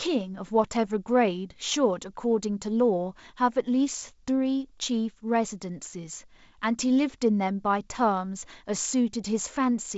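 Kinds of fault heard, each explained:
No faults are heard in the speech. The G.722 wideband telephone coding at 56 kbit/s can be heard in the band limit, with nothing above about 7.7 kHz, and in a light codec noise where the reduced lower-band bits leave their mark.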